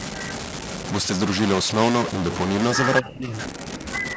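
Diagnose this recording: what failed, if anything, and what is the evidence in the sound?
A data bit likely stuck at a fixed value, in the converter or a broken line between it and the recorder, runs through the whole speech clip. Roughly half the samples land off by that bit's weight, so the speech carries a distortion that follows the waveform. Quiet moments don't go silent either: they fill with a noise floor that flips as small values change sign.

An echo leak is likely in the call processing. The far end's loudspeaker was picked up by its microphone, and its echo canceller let part of that through and sent it back. From 0.00 to 0.74 s and again from 3.46 to 4.17 s, a delayed copy trails the talker by 242 ms. It sits about 15 dB below the speech at first and about 20 dB below later.

Speech suppressed in double talk appears from 3.01 to 3.33 s. When both sides spoke at once, the echo canceller likely could not tell its own talker from the returning echo, so it turned both down. 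For about a third of a second the voice drops deeply, by roughly 35 dB at the worst point. The band stops at 8 kHz through this stretch, as the call microphone path shapes it.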